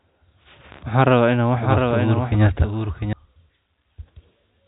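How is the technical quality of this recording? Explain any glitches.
The speech is band-limited to telephone width by G.711 coding, with nothing above 4 kHz. One glitch: a doubled audio track from 1.55 to 3.13 s, with a full-band copy about 5 dB down trailing by roughly 0.7 s, dry and starting and stopping abruptly. The likely cause is a second, slower capture path mixed in.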